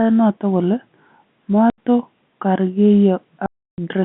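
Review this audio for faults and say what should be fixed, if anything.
Packet loss filled with silence cuts the speech at 1.70 to 1.78 s (80 ms) and 3.46 to 3.78 s (320 ms), with hard edges; both gaps are multiples of 20 ms, which fits 20 ms packets over the telephone-band G.711 line. Adding jitter buffering and packet loss concealment would prevent this.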